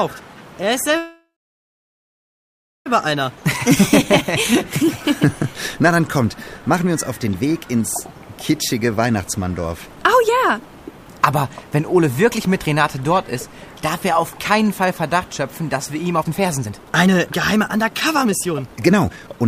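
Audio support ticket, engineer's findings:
Call audio freeze, 0.97–2.88 s: sound stops, the last moment carries on briefly as a fading buzz or hiss, then about 1.6 s of silence before audio resumes where it left off. Likely packets held in transit and the jitter buffer ran dry. About 1.9 s of gap inserted, nothing lost, end-to-end delay up by the same 1.9 s.

Jitter buffer speed-up, 3.06–3.37 s: brief hurried stretch at 110% speed, pitch unchanged. Receiver trimming single or few pitch periods to shed a few tens of ms of excess buffered audio.

Jitter buffer speed-up, 9.96–12.40 s: audio noticeably rushed, 109% speed, same pitch. Buffer over target. Roughly 0.2 s cut out in repeated small period-length removals.

Jitter buffer speed-up, 16.22–19.48 s (to end): strongly hurried, 137% speed, pitch held. Aggressive buffer drain, about a second of audio removed piece by piece to pull delay back down.

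Jitter buffer slow-down, 3.42–4.54 s: sound drawn out, slightly dragging, 97% speed at the same pitch. Buffer low or target delay just raised. Receiver repeating pitch periods and pause fragments, 37 ms added to rebuild reserve.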